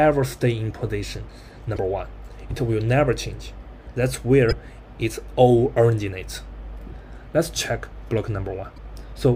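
Three short bursts of damaged data in a compressed stream break the sound at 1.74 to 1.78 s, 4.48 to 4.53 s and 8.74 to 8.78 s, each about 40 ms. The decoder misreads corrupted frames and resyncs at each point.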